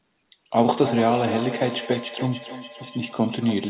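Feedback echo between two devices starts at 0.74 s. Speech returns via a second device, roughly every third of a second, about 10 dB down.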